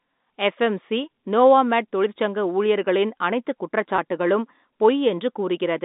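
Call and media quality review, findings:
Packet loss with pitch repetition, 3.96–3.98 s, after "ஊழியர்களின் அனைத்துக்". About 20 ms gap, fits one lost packet. Receiver concealment repeats the last pitch period, giving a brief held buzz. G.711 telephone band audible around it.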